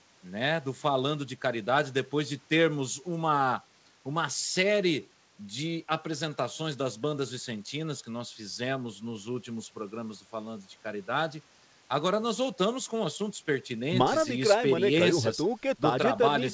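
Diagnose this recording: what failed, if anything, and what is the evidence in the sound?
Nothing failed; the call path sounds as intended.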